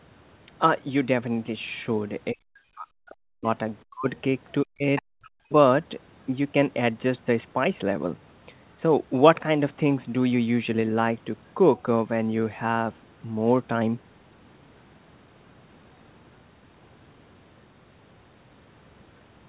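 Speech suppressed in double talk first appears from 2.32 to 3.46 s, then from 3.89 to 4.07 s and from 4.63 to 4.84 s. The talker's speech sinks by about 40 dB, likely because the echo canceller mistook simultaneous talking for its own loudspeaker echo and turned everything down.

Other side's voice leaking through follows at 4.96 to 5.02 s. It is a short scrap of a second voice, well below the talker, likely residual loudspeaker echo that the canceller failed to remove from the microphone. Like the rest of the clip, it is heard within the narrow band below 4 kHz, which fits a G.711 call.

Suppression returns from 5.06 to 5.52 s. The same deep dip cuts the talker away again, likely the canceller reacting to the renewed overlap.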